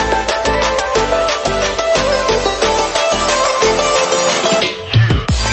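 Nothing stood out on listening, with the audio carried over an ordinary call path and no faults heard.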